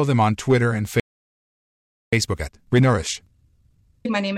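The player most likely ran short of data or had its output thread held up at 1.00 s, so this speech clip hits a playback stall: the sound halts mid-flow and the output sits silent for about 1.13 s, resuming at 2.13 s. That gap is long enough to be heard as a clear break rather than a glitch, and the speech picks up again after the dead air. Once playback resumes, the player works off the backlog it built up during the outage through time-compressed catch-up. It trims small slices out of the stream and cross-fades the joins, so from 2.13 s to the end the speech runs about 1.25 times faster than normal while keeping its natural pitch. The result sounds rushed rather than higher.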